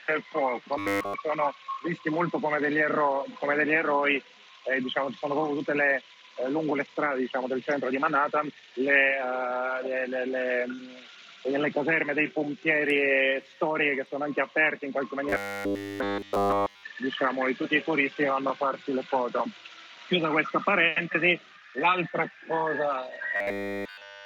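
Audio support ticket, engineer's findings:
Robotic sound from repeated short buffers at 0.79–1.14 s, 15.29–16.83 s and 23.36–24.25 s (runs to end of clip). Rigid metallic buzz fixed at 100 Hz, i.e. a 10 ms loop; within each span essentially all the real audio is replaced. Likely cause: input starved, playback repeating the last buffer. Unlike a plain dropout, there is no silence, just a steady buzz that follows the underlying sound only roughly.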